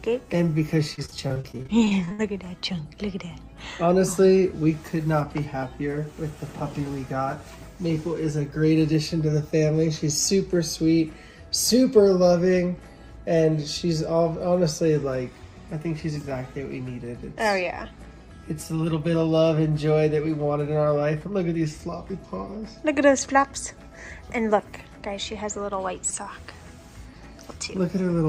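From 0.95 to 2.21 s, repeated packet loss (robotic sound): fifteen gaps, longest 62 ms, are concealed by extending prior audio, leaving choppy, fragmented sound.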